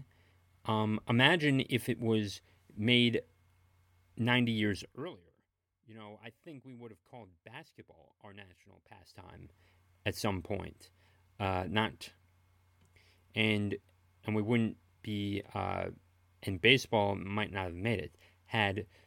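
From 4.79 to 5.15 s the speech carries zipper noise. Over those 0.36 s the level drops by roughly 20 dB, but the gain moves in discrete jumps, around a hundred per second, instead of following a continuous ramp. Each jump leaves a small discontinuity in the waveform, so the fade comes across as a fine ticking, zipping rasp riding on the speech while the level falls.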